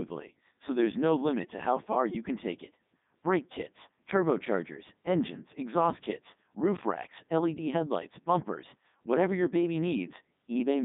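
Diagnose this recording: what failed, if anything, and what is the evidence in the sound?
The codec stage broke this: it's the Codec 2 vocoder all the way through. The speech comes out robotic and buzzy, squeezed into roughly 150 Hz to 3.7 kHz with nothing above 3.8 kHz. Heavy damage like this fits its top 3.2 kbit/s mode, which rebuilds the voice from sine waves and discards the original waveform.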